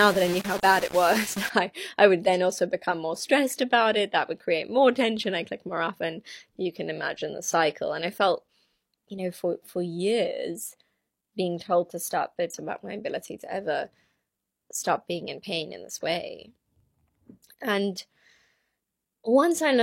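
A speech clip with two faults. From 0 to 1.5 s, before "I I would then", the sound is coarse and gritty, with the distortion only about 10 dB below the speech. The likely cause is low bit depth without dither, rounded to about 5 bits. Unlike dithered noise, this grain follows the signal and sputters in quiet moments. Between 12.50 and 12.55 s, after "told to stop but", the audio jumps ahead to "about my ability to" with a small blip, likely a stream segment skipped. Unlike a dropout, there is no silent gap, and material is missing.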